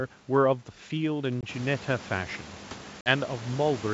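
Packet loss on an ADPCM call cuts hard-edged silent holes at 1.41 to 1.43 s and 3.01 to 3.09 s. About 20 ms and 50 ms of audio are missing. The decoder's predictor and step size then drift from the sender's. Speech resumes with brief, slight distortion.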